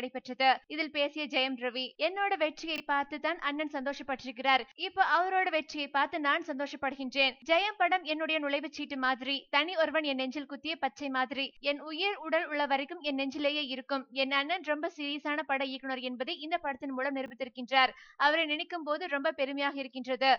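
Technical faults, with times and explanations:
2.76–2.80 s and 17.26–17.30 s, chunks out of order: a 20 ms chunk arrived late and swapped places with its neighbour, so the sound briefly jumbles.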